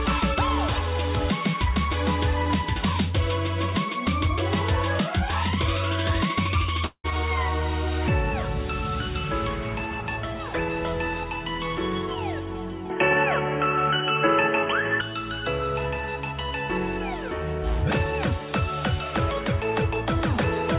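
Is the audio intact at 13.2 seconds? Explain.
No. From 12.90 to 15.01 s the sound turns dull and boxy with no gap at the change. Everything above 3.2 kHz is gone, narrower than the 4 kHz ceiling of the G.711 call path, the level shifts by about 5 dB, and a new noise floor appears roughly 40 dB down. This is likely an input switched to a poorer device, a different microphone or headset profile with its own narrower band, tone and background noise.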